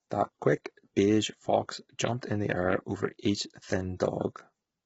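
From start to finish the speech carries heavy coding damage typical of low-delay AAC compression, most likely AAC-ELD at a low rate, which fits roughly 16 kbps. The short frames this codec uses to keep delay down cannot separate pitch harmonics cleanly, so the voice turns rough and grainy, with noise filling the gaps between harmonics. The top of the band is cut off, with nothing audible above 7.7 kHz.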